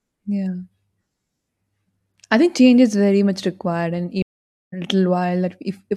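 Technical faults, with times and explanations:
4.22–4.73 s, stream reconnect: the speech cuts to about 0.5 s of silence, then resumes roughly half a second later, as a new decoder restarts mid-stream.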